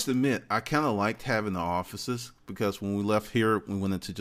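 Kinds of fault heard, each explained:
No technical faults can be heard in the signal: the level stays steady, with no interruptions, distortion or added noise.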